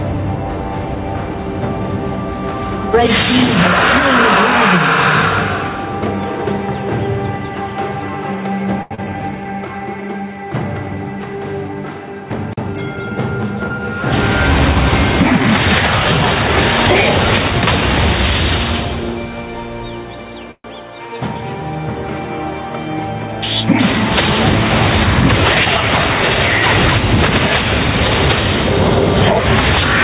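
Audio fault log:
throughout, gain pumping: The input gain was likely set far too high, so a fast limiter keeps pulling the level down by about 10 dB on every loud sound. Loud and soft parts sit closer in level, leaving the sound squashed.
8.82–8.93 s, short stall from a late packet: A packet arrived late and the jitter buffer ran dry, so the receiver held the last sound for 86 ms until the data came. Nothing is lost, but one sound hangs unnaturally long with a slight buzz or dip.
8.95–9.00 s, short concealed packet loss: About 60 ms of audio missed the decoder, and the receiver extended the preceding sound for 30 ms before blending back in. The result is a brief smear or wobble.
9.04–9.22 s, jitter buffer slow-down: Running low, the buffer rebuilt its reserve by repeating tiny slices of waveform, adding 42 ms. For this stretch the audio plays at 82% speed with unchanged pitch, sounding drawn out.
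12.73–13.94 s, jitter buffer speed-up: The buffer held more audio than its target, so the receiver trimmed small pieces, roughly 70 ms in total. The sound runs at 105% speed with the pitch intact and comes across as slightly hurried.
20.51–20.66 s, call audio freeze: Packets were likely held up in transit, emptying the buffer. The receiver stretched the last sound into a fading buzz or hiss over 129 ms, including 50 ms of silence, then resumed exactly where it stopped, inserting a pause.
25.65–25.68 s, short concealed packet loss: About 20 ms of audio never reached the decoder, and 6 ms of synthesized continuation bridged the gap. This shows up as a brief smear or wobble, heard through the G.711 path with nothing above 4 kHz.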